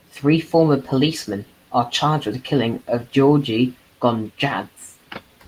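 No technical faults can be heard anywhere in the speech. The Opus voice compression keeps the full audio band, with the SILK and CELT layers working together, and leaves only a light trace of coding texture, which fits a moderate bitrate of around 24 kbps.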